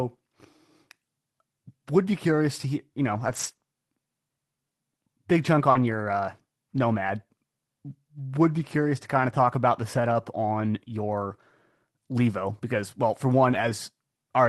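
Speech with scattered short gaps between 3.15 and 13.71 s: about three brief dropouts, the longest around 40 ms, with roughly 80 ms lost in all. Each was concealed by extending the preceding sound, heard as small ticks or smears, consistent with late or lost packets on a call path whose 12 kHz top end fits Opus.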